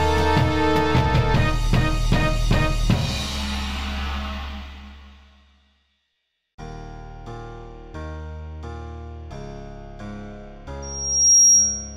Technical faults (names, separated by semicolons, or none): loudspeaker feedback squeal